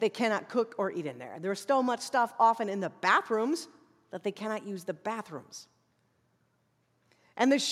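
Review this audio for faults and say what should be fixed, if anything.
Nothing to fix, as no faults turn up anywhere in the speech recording.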